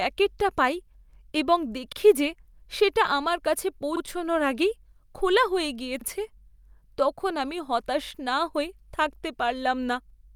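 Overlapping chunks: the speech was processed in 2-second blocks, each beginning 44 ms before the previous one finished, so that slice plays twice at every join. The result is a brief stutter or click at 1.93, 3.97, 6.01, 8.06 and 10.10 s.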